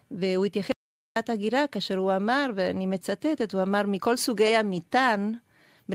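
At 0.72 s the speech drops out to dead silence and comes back at 1.16 s, so about 0.44 s is gone. It's an audio dropout to silence: no room tone at all, likely from the input briefly disconnecting or getting muted while recording carried on.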